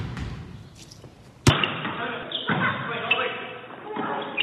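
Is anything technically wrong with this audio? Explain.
Yes. From 1.50 s to the end, the sound turns dull and a few dB quieter, with nothing above 3.8 kHz and faint new background noise. The likely cause is that the input switched to a poorer device.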